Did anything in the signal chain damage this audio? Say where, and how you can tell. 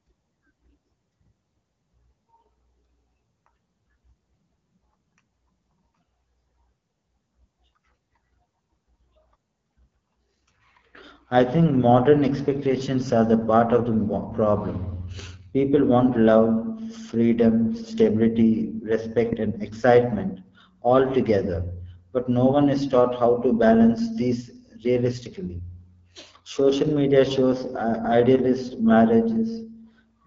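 Yes. The damage comes from the codec stage: the AMR wideband (HD Voice) codec ran at a low rate throughout, which fits its 8.85 kbit/s mode. The speech has a rough, raspy texture because the vocal tract model is starved of bits. The audio stops dead above about 7.5 kHz.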